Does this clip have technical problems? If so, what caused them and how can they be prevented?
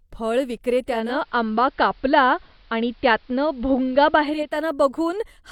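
Yes. From 0.85 to 4.63 s the speech shows digital radio blending to analogue: the receiver lost its digital stream and cross-faded over about 0.47 s to the AM broadcast of the same station. The treble drops, the level shifts by about 3 dB, and hiss appears around 40 dB below the speech. The gradual fade both ways, together with the hiss arriving alongside the narrower band, sets it apart from a plain low-pass filter or a codec bitrate drop. Better antenna placement or a stronger digital signal, so the receiver never falls back to analogue, would prevent it.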